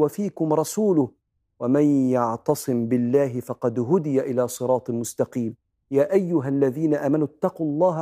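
Nothing goes wrong anywhere in this speech recording, so there's nothing to point to along the way.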